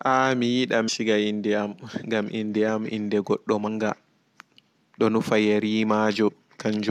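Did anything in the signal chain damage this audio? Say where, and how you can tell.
Yes. The damage is at the codec stage: compressed frames were skipped during decoding, either missing from the file or rejected as corrupt. The speech jumps forward at 0.87 s, 3.67 s and 6.27–6.30 s, losing roughly 150 ms, 100 ms and 20 ms respectively. Whole frames vanish, so the gaps come in frame-sized chunks.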